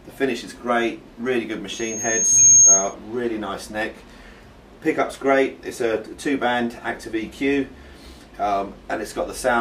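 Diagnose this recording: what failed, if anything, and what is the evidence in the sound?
A microphone was picking up the loudspeaker it fed, and at about 6.5 kHz the loop gain rose above one, causing loudspeaker feedback squeal in the analogue acoustic path. From 1.72 s a single high tone at 6.5 kHz swells over roughly three quarters of a second until it sits about 15 dB above the rest of the audio. It then holds as a piercing squeal until it cuts off at 2.94 s, when the loop was broken.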